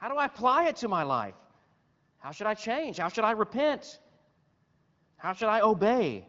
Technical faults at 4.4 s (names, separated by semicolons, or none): none